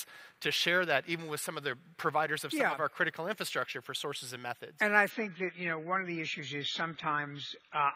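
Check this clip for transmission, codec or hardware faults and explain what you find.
One transmission fault is present. From 5.10 s to the end, the adaptive stream drops to a lower bitrate. The connection slowed, so the player switched versions without a gap. Treble vanishes above 7 kHz and artefacts thicken, consistent with AAC falling from 96 to 16 kbit/s.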